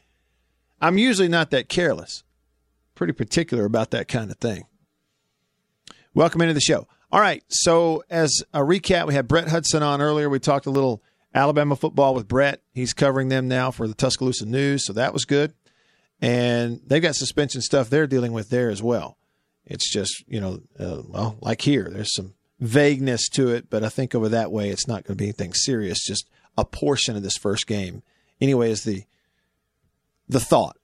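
From 0.96 to 30.35 s, a click recurs every 1.4 s. These are likely clock drift buffer slips, each dropping or repeating about 15 samples.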